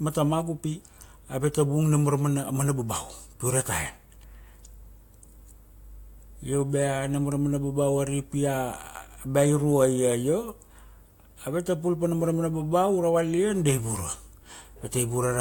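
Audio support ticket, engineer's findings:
Speech signal shows no audible technical faults at any point, so no component or mechanism is implicated.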